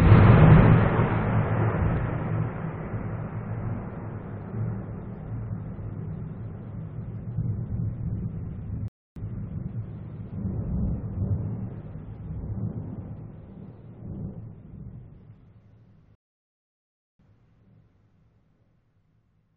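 Twice the player drains its buffer of downloaded audio and has to halt until more data arrives, a rebuffering stall each time. At 8.88 s the sound drops to silence for 280 ms; at 16.15 s it stops again, this time for 1.04 s. After each gap playback picks up at exactly the point where it broke off, so no audio is missing, but each pause stretches the timeline.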